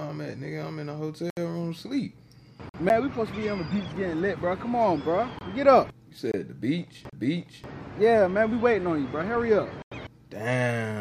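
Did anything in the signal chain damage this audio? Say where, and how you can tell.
Yes. There are two separate problems, one at the driver or buffer stage and one at disc playback.

Five blocks of digital silence occur at 1.30 s (about 70 ms), 2.69 s (46 ms), 5.39 s (23 ms), 6.32 s (23 ms) and 9.82 s (93 ms). Each cuts out hard, with no fade. The gap lengths fit whole buffers of 1024 to 4096 samples, which points to buffer underruns.

The two CD skips differ. At 2.89 s there is a mute of around 10 ms, and at 7.10 s one of around 30 ms. After each, the sound continues from a different point. That jump in continuity, not the silence, marks a laser jumping track on a disc.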